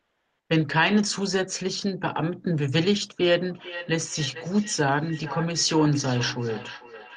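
Speech over a call connection, with two faults. From 0.00 to 0.47 s there is comfort noise in place of the background. The real room sound is missing. A steady, featureless hiss sits there instead, about 5 dB quieter than the true background, which is itself about 54 dB below the loudest speech. The likely cause is discontinuous transmission in the Opus codec. The sender stopped transmitting during silence, and the receiver filled the gap with synthetic noise. From 3.54 s to the end there is feedback echo between two devices. The speech returns about every 0.4 s, thinner and more ringing each pass, peaking about 15 dB below the direct speech. A second device in the same room is playing the call aloud. That sound leaks into this microphone, and the echo canceller cannot remove audio it did not play. Across the clip, the top end stops near 12 kHz, which fits Opus coding on the call path.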